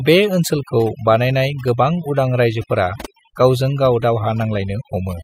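From start to finish the speech carries overdone noise removal. A noise reducer pushed too hard has pulled individual frequency bands down or out wherever they came close to its idea of the noise floor, and the softer parts of the speech were cut along with the noise. Between phrases the background drops to near silence flecked with twinkling specks. A spectrogram shows this as scattered isolated dots in the gaps and ragged, hollowed-out holes through the quieter parts of the speech.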